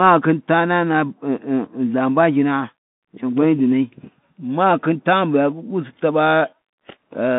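It's a speech clip squeezed through a Bluetooth CVSD headset codec for its whole length. The band runs roughly 150 Hz to 3.6 kHz, with nothing above 3.7 kHz, and the one-bit adaptive coding, which fits a 64 kbps link, leaves scratchy sibilants and a grainy hiss underneath.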